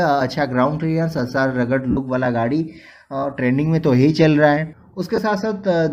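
Lost LE Audio frames cause two brief noisy smears, at 1.91–1.97 s (60 ms) and 5.16–5.18 s (20 ms), where the LC3 decoder concealed missing frames by repeating the last spectrum with randomised signs. Light lossy compression is also present.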